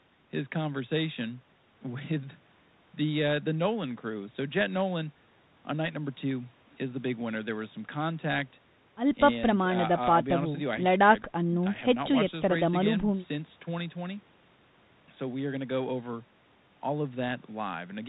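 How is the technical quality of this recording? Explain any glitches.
No glitches can be heard in the speech; the signal has the narrow, telephone-band character of a call path, with the call microphone processing trimming the lowest bass and G.726 ADPCM coding at 32 kbit/s, the rate used by DECT cordless phones, keeping everything below 4 kHz and adding only a light coding grain.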